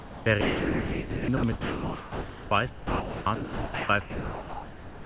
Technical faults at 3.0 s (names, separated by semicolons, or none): sound dropped by the voice detector